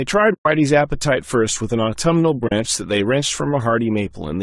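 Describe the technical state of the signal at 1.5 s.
At 1.5 s the speech carries low-delay AAC compression, present across the whole clip. The voice sounds rough and grainy, with noise between the harmonics. This is likely AAC-ELD. Its short frames resolve pitch poorly, and the damage fits a bitrate near 32 kbps.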